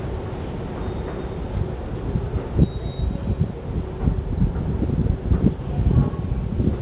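No faults found: the audio carries nothing above 4 kHz, consistent with a narrowband call path that likely used G.711 A-law coding, and that band limit is expected behaviour rather than a defect.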